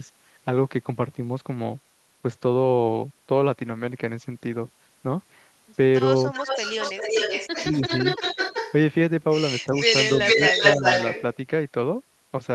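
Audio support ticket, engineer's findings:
Echo leak, 6.33–8.73 s and 9.73–11.22 s. Delayed copy of the talker returns about 374 ms and 389 ms later, first somewhat below the direct sound, then louder than it. Likely far-end loudspeaker pickup that the echo canceller failed to remove.

Speech suppressed in double talk, 9.67–9.72 s and 10.59–10.83 s. Talker's level dips briefly, mildly in the first, roughly 10 dB in the second, while far-side audio plays on the loudspeaker. Echo canceller likely cannot separate talker from echo and turns both down.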